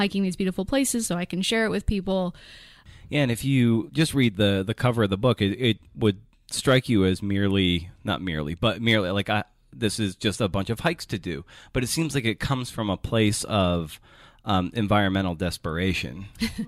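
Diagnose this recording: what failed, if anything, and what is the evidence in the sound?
Nothing failed; the speech recording shows no audible faults.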